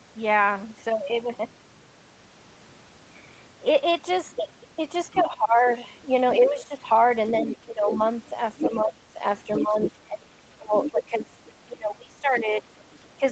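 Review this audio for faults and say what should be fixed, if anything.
The other side's voice leaking through appears as a brief burst at 5.11 to 5.23 s, about 15 dB below the speech, then a long stretch from 6.31 to 11.52 s at nearly speech level, and a faint trace at 12.79 to 13.09 s. Each is likely loudspeaker echo the canceller missed, seen on a spectrogram as a second, overlapping harmonic pattern. Better echo-path modelling or a headset would prevent it.

Speech is suppressed in double talk from 5.14 s to the end, with dips of up to around 20 dB. The canceller likely attenuated everything while both sides spoke. The waveform shows the envelope collapsing. A double-talk detector that preserves near-end speech would prevent it.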